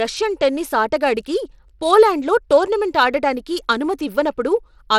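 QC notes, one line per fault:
Throughout: Bluetooth SBC compression. The speech carries a gritty, grainy noise and flickering upper treble, with plainly audible codec damage and nothing above 17.3 kHz. The likely cause is coarse sub-band quantisation starving the top bands, which fits a bitrate near 96 kbps.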